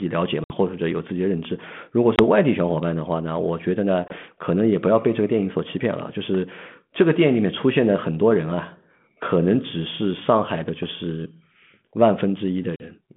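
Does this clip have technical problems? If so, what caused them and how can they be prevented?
Yes. The speech drops into abrupt silent holes at 0.44, 2.16, 4.08 and 12.76 s, about 60, 20, 20 and 40 ms long, then returns with brief distortion. This is packet loss on an ADPCM call. On this band-limited line, which fits 32 kbit/s G.726, roughly one to three packets went missing each time. The decoder's adaptive predictor and step size lost track of the sender's, so the resumed speech is briefly wrong until they realign. Reducing network loss or adding packet-loss concealment and jitter buffering would prevent it.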